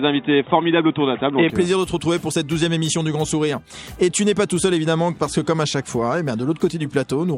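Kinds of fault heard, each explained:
Input switched to a poorer device: For the first 1.5 s the sound is dull and boxy, with nothing above 3.8 kHz and a faint background noise of its own. At 1.5 s it opens up to full bandwidth with no gap, and the level shifts by around 5 dB. This is likely a change of input device mid-recording. A plain filter or codec bandwidth drop would change only the top end, whereas here tone, level and noise floor all change together at one instant.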